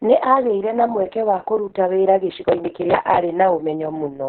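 From the start, the speech carries Opus voice compression at a very low rate, about 6 kbps, in its SILK linear-prediction mode. Nothing survives above about 4.4 kHz, so the sound is squeezed into a narrowband telephone-like range, and the excitation is coded so coarsely that the voice turns muffled, hoarse and faintly robotic. Unlike a simple low-pass filter, the damage lives inside the voice itself, a buzzy, synthetic grain that a filter alone would not add.

At 2.30 s, right after "mweke wa kũruta wĩra", processor overload crackle begins and runs to 3.18 s. The processor kept missing its deadlines for very short audio buffers, a few milliseconds each, which fits buffers of around 3 ms, and dozens were skipped outright. Each skip leaves a hard-edged gap, and together they form a gritty tearing layered over the speech. It is not network packet loss, which would leave fewer, longer holes of tens of milliseconds. 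Nor is it clipping, because the grit follows the timing of the missed buffers rather than the loud peaks, and it stops cleanly once the load passes.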